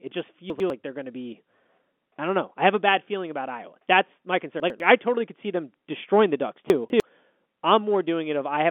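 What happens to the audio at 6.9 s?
At 6.9 s the sound is inside a chunks-out-of-order fault running from 6.7 to 7.0 s. A 100 ms chunk arrived two chunks late, so it plays after the two chunks that should follow it. The speech in this stretch comes out briefly jumbled, with three hard joins. Unlike a dropout or packet loss, there is no silence, fill or repeat here, because every piece is present and only the order is wrong. The narrowband telephone sound continues through it.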